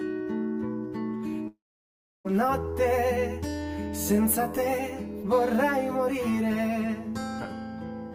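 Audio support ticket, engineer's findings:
Hollow, phasey coloration for the whole clip; channel delay (comb filtering). One channel about 10 ms late, summed to mono. Shared content cancels at regularly spaced notches, first near 50 Hz, then every 100 Hz or so. Check the channel alignment and buffer path before the mono fold-down.

Audio gap 1.47 to 2.27 s; likely a long network dropout. The last sound is stretched into a fading buzz-hiss, then silence or a low steady floor until 2.27 s. About 0.78 s of the audio is lost outright. Check the transport and jitter-buffer logs for this window.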